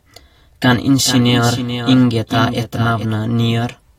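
From 1.05 s to 3.05 s the speech is overlaid by a doubled audio track: a second full-band copy trailing roughly 400 ms behind and about 10 dB quieter, likely from the same signal reaching the mix twice by a slower path. It sounds like a dry, distinct repeat with no room decay, switching on and off abruptly. On a spectrogram, each harmonic stack reappears fainter, shifted right by that fixed gap; the waveform shows a weaker replica riding beneath.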